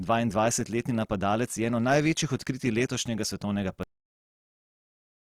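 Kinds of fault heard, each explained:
Opus compression: grainy, rough texture across the speech with plainly audible artefacts, likely from Opus music-mode coding; the spectrogram shows full bands but noisy, filled-in detail.
Cut-off end: the speech stops abruptly mid-sound at 3.83 s, and the waveform drops straight to flat digital silence with no decay.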